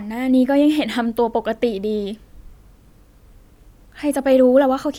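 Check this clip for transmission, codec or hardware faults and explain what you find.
Nothing in the speech signal points to a transmission, codec or hardware problem; it runs continuously with no interruption or level disturbance.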